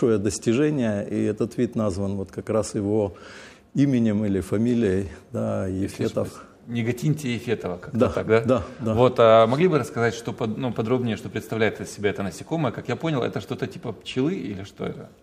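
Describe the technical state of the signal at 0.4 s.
At 0.4 s the signal is intact, with nothing audible there that points to a technical fault.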